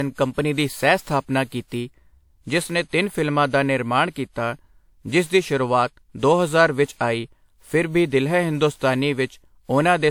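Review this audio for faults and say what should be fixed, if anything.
Generation loss runs throughout: swirling, hollow, smeared speech with blurred attacks despite full bandwidth, likely from about five lossy re-encodes, consistent with WMA at 96 kbit/s, unlike one low-bitrate pass. Prevent it by editing from a lossless master and encoding only once.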